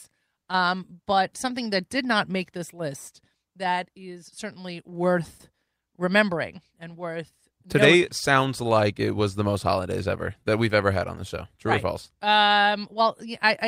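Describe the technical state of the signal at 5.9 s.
At 5.9 s the signal is intact, with no audible fault at that moment.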